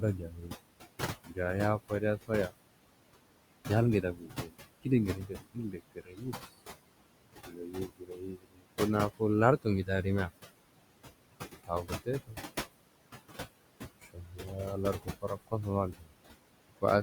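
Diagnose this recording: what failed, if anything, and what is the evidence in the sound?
The failure sits in call processing, where the noise suppressor leaves artifacts throughout. It pulls the room noise, which sits about 11 dB under the speech, down by about 21 dB between phrases and lets it rise under speech. On a spectrogram, the noise floor pumps with the speech and breaks into flickering specks.

Speech cut by the noise suppressor occurs at 0.01–0.53, 1.26–2.53, 4.02–6.34, 7.45–8.66, 9.19–10.31, 11.67–12.37 and 14.02–16.12 s. Quiet speech is misread as noise and turned down by about 10 to 22 dB. Word edges sound swallowed, and the spectrogram shows gaps in the speech where the bands were turned down.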